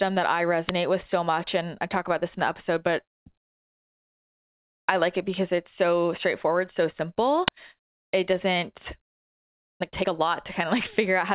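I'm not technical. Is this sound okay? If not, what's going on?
No, there are two problems. At 0.69 s and again at 7.48 s you'll hear a brief, harsh crack. That's an uninitialised buffer: the system played a chunk of memory before any real audio had been put into it, so leftover junk came out as sound.

Then from 9.74 s to 11.31 s the speech suddenly runs about 17% fast, though the pitch stays put. That's a jitter buffer speed-up. Too much audio had piled up waiting, so the receiver quietly snipped out tiny slices, roughly a third of a second in total, to catch up. The dull, phone-like sound throughout, with nothing above 4 kHz, just comes from the call line it went through.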